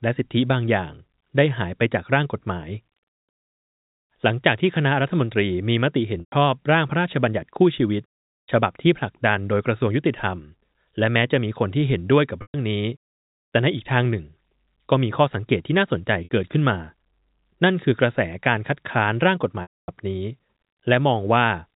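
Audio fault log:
6.2–6.32, 12.42–12.54, 16.24–16.29 and 19.62–19.88 s, packet loss with pitch repetition: lost 120, 120, 60 and 260 ms of audio were bridged by repeating the last pitch period. This gives a brief buzzy hold that fades to silence before a short cross-fade back.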